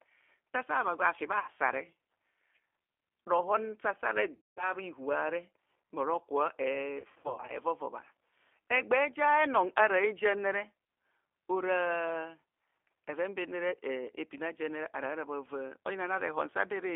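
Throughout, the speech sounds slightly rough and synthetic and is confined to a narrow telephone band of about 300 Hz to 3.4 kHz. This is the G.729 codec at 8 kbit/s, rebuilding each frame from a vocal tract filter, a pitch predictor and a few pulses.

At 1.40 s the sound smears into a brief buzzy tone or coloured noise that fades, and it stays weak just after. At 4.35 s this happens again and runs to 4.73 s. From 6.99 s to 7.59 s it breaks up into scattered stretched fragments. These are VoIP packet losses concealed by the speech codec. The decoder extrapolates from its last pitch and filter while lowering the gain, so the speech recovers slowly once packets return. About 80 ms, 220 ms and 300 ms of audio are lost. The last loss is spread over roughly half a second in runs no longer than 80 ms.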